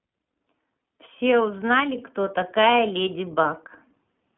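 Throughout the speech, the iLBC codec limits sound to about 150 Hz to 3.5 kHz, with nothing above 3.8 kHz. It codes each 30 ms frame's excitation independently, adding a plainly rough, synthetic grain that a clean band-limited telephone line would lack.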